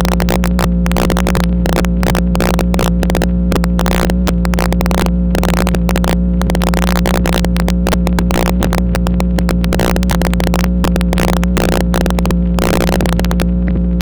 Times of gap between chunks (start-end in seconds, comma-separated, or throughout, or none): none